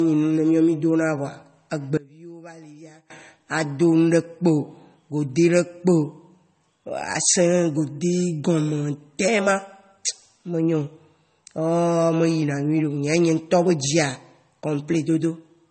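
Transcoding between lossy codecs runs throughout: nothing remains above about 8.4 kHz, and two layers of coding artefacts are heard together. The likely cause is a low-bitrate MP3 re-encoded to AAC, each pass adding smearing while the lower cut-off stays.

One channel inverted, from 1.97 to 3.10 s: the speech drops by about 24 dB, as though only a faint copy remains. This is likely a polarity flip on one channel, so summing to mono cancels the shared centre.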